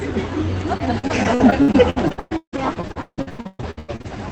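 Repeated packet loss (robotic sound) runs from 0.77 to 4.10 s: 29 holes, the longest 160 ms, each patched by stretching the preceding sound before the next arrives. About 45% of that span is concealed, giving choppy audio with pieces missing, heard through an Opus-style call path limited to about 8 kHz.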